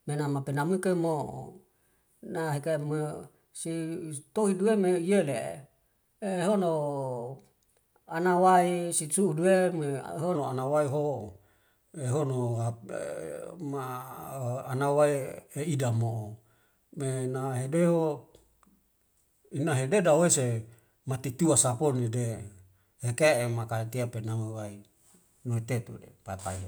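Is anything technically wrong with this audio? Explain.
Yes. From the start to 10.35 s, a section at the wrong speed runs 1.13 times faster than recorded. Pitch rises with it, by about two semitones. The speech sounds higher and hurried. At 10.35 s it snaps back to natural pitch and pace. The likely cause is a clock mismatch, where this stretch was played or edited against the wrong rate. Speed and pitch then shift together.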